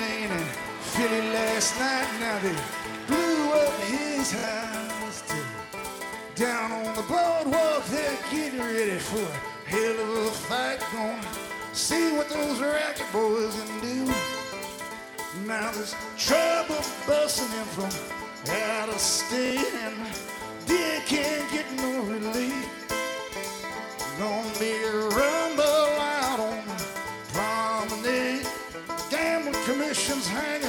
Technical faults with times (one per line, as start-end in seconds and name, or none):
4.39-4.43 repeated buffer
19.46-19.50 repeated buffer